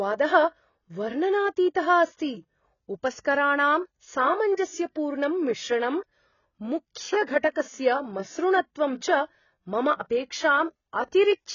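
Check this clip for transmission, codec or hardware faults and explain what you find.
One codec fault runs through the whole speech clip. Throughout, it sounds dull, smeared and warbly, with nothing above 7 kHz, likely from AAC compression at a very low bitrate, around 16 kbps, which removes and coarsely quantises high-frequency detail.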